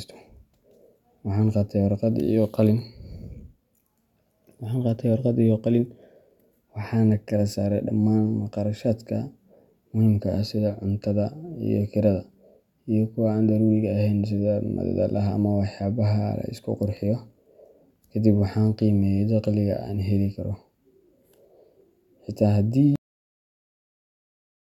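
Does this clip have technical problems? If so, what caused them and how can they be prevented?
Yes. At 22.96 s the speech stops dead partway through a sound and drops straight to digital silence, with no decay or room tail, and that silence runs to the end of the clip. This is a cut-off end: the recording or export stopped before its final buffers were written out, so the last stretch of audio never reached the file. Prevent it by flushing and closing the writer fully, with some padding, before the file is finalised.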